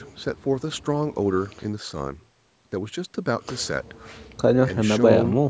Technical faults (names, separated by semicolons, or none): none